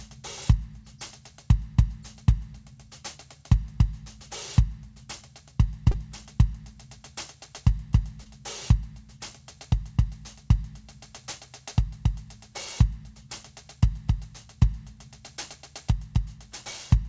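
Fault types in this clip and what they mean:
Short concealed packet loss, 5.91 to 5.95 s: about 20 ms of the music failed to reach the decoder in time. The receiver covered the gap by extending the preceding sound for roughly 21 ms, then crossfaded back into the real signal. The result is a brief smear or wobble in the music, heard against a band that stops at 8 kHz, which fits the wideband call codec carrying it.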